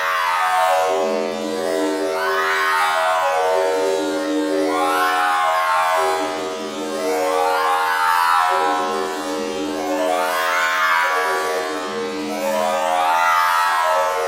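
No dropouts, distortion, level jumps or other technical faults are audible anywhere in this recording of sounds.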